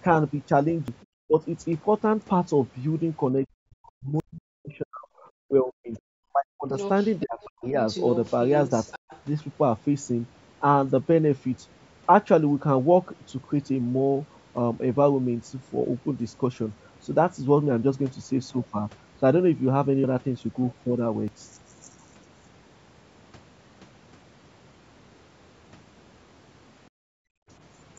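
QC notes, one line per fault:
0.88 s, 4.2 s, 20.04 s, 21.28 s: dropped buffer (overrun). Each is a sudden jump forward in the speech with no gap. The likely cause is samples overwritten before they were read. About a tenth of a second is lost at 0.88 s and about 40 ms at the others.
1.25–1.35 s, 3.45–5.12 s, 5.43–5.99 s, 6.33–6.75 s, 7.23–7.75 s: speech suppressed in double talk. The talker's speech dips sharply, by roughly 40 dB at worst, and comes back. Both sides were likely talking at once, and the echo canceller pulled everything down. The longest stretch lasts about a second and a half.
5.95–6.0 s, 6.78–9.2 s: other side's voice leaking through. A second voice is heard under the talker. At 5.95 s it is a brief, very faint scrap, about 35 dB down. From 6.78 s it is a sustained stretch only about 10 dB below the speech. The likely cause is loudspeaker playback that the echo canceller did not fully remove from the microphone.
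26.9–27.48 s: background gated by the echo canceller. The room sound drops away by about 37 dB for roughly half a second, then returns. The canceller clamped the microphone hard while the loudspeaker played and released it afterwards.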